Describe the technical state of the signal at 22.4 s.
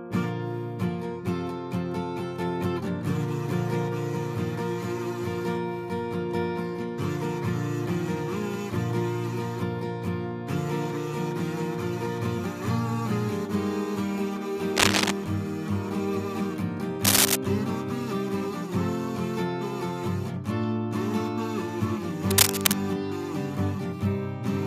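Cable scratch noise from 22.30 to 22.76 s: rustling bursts somewhat louder than the sound, likely a worn contact, appearing as dense broadband speckles and ragged waveform spikes.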